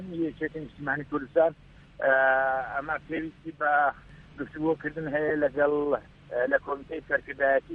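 Lost LE Audio frames occur twice in this audio: from 3.16 to 3.19 s, about 22.5 ms of signal is missing, which fits three 7.5 ms frames, and at 5.28 s a 15 ms gap fits two. The Bluetooth LE Audio link dropped these frames, and the LC3 decoder concealed each gap by repeating the last good spectrum with randomised signs. This produces a short, noisy smear where the sound briefly loses its clarity.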